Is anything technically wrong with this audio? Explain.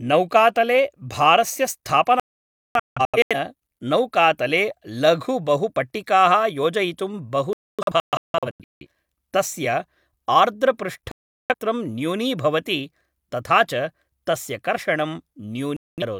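Yes. Digital broadcast dropouts at 2.20–3.36, 7.53–8.86, 11.12–11.54 and 15.77–16.03 s: the receiver muted on corrupt frames, so the speech vanishes in silent holes, the first two broken into several gaps, and resumes later.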